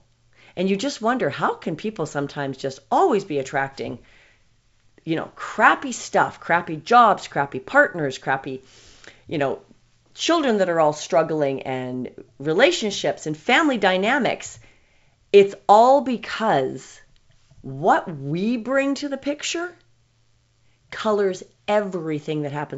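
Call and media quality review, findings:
Nothing stood out on listening to this speech recording over the G.722 wideband telephone path.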